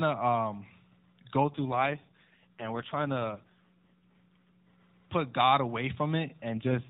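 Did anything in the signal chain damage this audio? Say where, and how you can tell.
Yes. An AMR rate drop, set by the network, hits 1.44 to 4.68 s and 6.50 s to the end. The band stays capped at 4 kHz with no gap, but the sound turns buzzy and synthetic. That fits a fall from 12.2 to 4.75 kbps.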